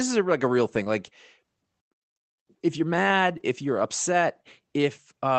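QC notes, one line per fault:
0.83–0.88 s and 3.38–3.41 s, short concealed packet loss: each time, about 20 ms of the call failed to reach the decoder in time. The receiver filled the hole by extending the preceding sound, carrying on its pitch where it was voiced and shaped noise where it wasn't, then crossfaded back into real audio. The result is a brief smear or wobble, and any short consonant falling in that slot can be lost.
0.86–0.88 s and 3.39–3.41 s, lost packet rebuilt from error correction: in the latter part of each concealed stretch, one 20 ms packet went missing, but the next packet carried a low-bitrate Opus in-band error-correction copy of it, so the decoder played that instead of leaving a gap. Those frames sound rougher and noisier than the surrounding audio, which passes through the 24 kbps Opus call path with content reaching up to 8 kHz.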